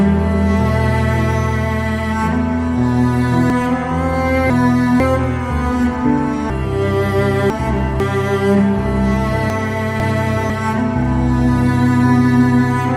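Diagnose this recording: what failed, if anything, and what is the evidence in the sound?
What failed is buffering or packet delivery: chunks out of order, three times. At 3.5 to 5.0 s and 6.5 to 8.0 s, a half-second block plays two slots late, and at 9.5 to 10.5 s one lands a slot late. Each stretch sounds jumbled across its hard joins, though nothing's actually missing.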